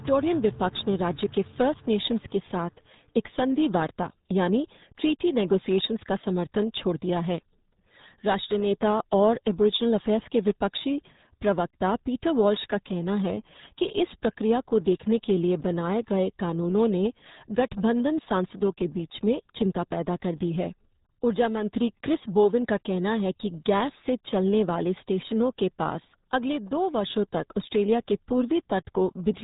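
From start to finish, the speech carries the sound of the RealAudio 14.4 codec. This early dial-up speech coder squeezes audio into very few bits. Nothing passes above about 3.8 kHz, so the top of the spectrum is simply gone. The voice sounds muffled and boxy. Heavy coding damage adds a gargly, watery texture to every syllable. The thin, smeared result fits an 8 kbit/s rate, typical of modem-era streaming.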